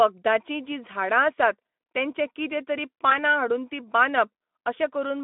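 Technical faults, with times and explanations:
3.10 to 3.15 s, VoIP packet loss concealed by the speech codec: The speech briefly smears into a stretched, weakening sound. The decoder filled the gap by repeating its last pitch and filter at falling gain. The gap fits one lost 20 ms frame, in a light-sounding narrowband Speex stream.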